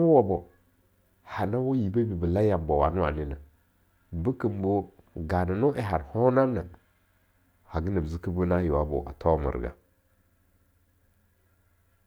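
No technical faults can be heard anywhere in this speech recording, and the signal holds steady throughout with nothing interrupting or altering it.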